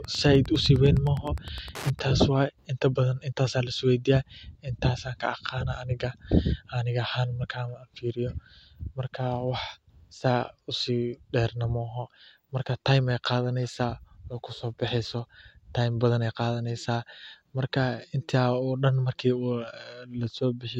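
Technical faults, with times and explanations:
0.0 to 2.0 s, Wi-Fi interference: a steady ticking sits under the speech, repeating every 102.4 ms, or just under ten times a second, at roughly 20 dB below the speech. A Wi-Fi radio close to the audio circuit sends its beacon at this interval. Some part of the circuit rectifies each burst of radio energy, turning it into a brief pulse in the audio band that is heard as a tick.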